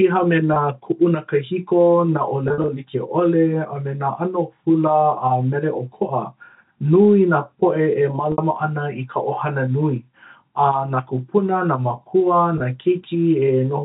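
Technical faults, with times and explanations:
0.54–0.56, 2.48–2.68, 8.32–8.38 and 12.58–12.60 s: packet loss with pitch repetition. Losses of 20 to 100 ms, scattered at 2.48 s, are filled by repeating the last pitch period, giving a brief held, buzzy sound on the short gaps, while the 60 ms gap between "nui nā poʻe e" and "ana i" fades into silence before the speech returns.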